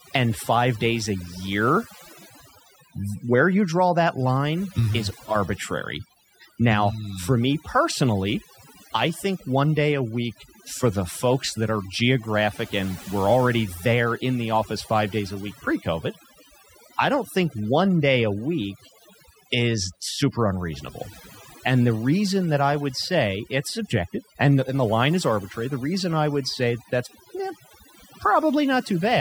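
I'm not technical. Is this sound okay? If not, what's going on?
No, not quite. The whole clip has overdone noise removal. Someone ran a noise-cleaning tool turned up too far, so it shut off any slice of the sound that looked like background hiss, and the softer parts of the speech got cut along with it. You can hear it in the pauses, where there's near-dead silence with odd little twinkly specks.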